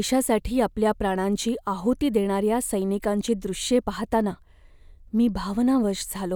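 No technical faults detected.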